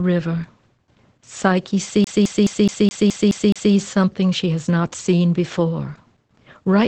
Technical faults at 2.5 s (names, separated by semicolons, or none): Opus voice compression; CD stuck on one turn